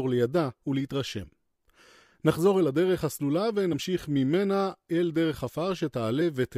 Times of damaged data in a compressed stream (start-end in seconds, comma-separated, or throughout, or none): 1.23-1.25, 3.72, 6.20